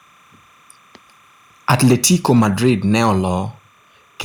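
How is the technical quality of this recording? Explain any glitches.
The recording has three technical faults: a constant tone underneath, a stretch of harsh distortion, and one sudden level drop.

Timecode bleed runs throughout: a faint chirping warble alternating near 1 and 2 kHz, roughly 40 dB below the speech, leaking from a timecode track. Its pattern fits 29.97 fps code.

Microphone overload, 1.7 to 3.1 s: peaks exceed the converter ceiling by about 5 dB and lose their tops, giving loud syllables a crackling, harsh edge, likely from excessive input gain.

Microphone volume stepped down, at 1.93 s: speech and background drop abruptly by about 2 dB, likely call software lowering the input level after detecting the clipping.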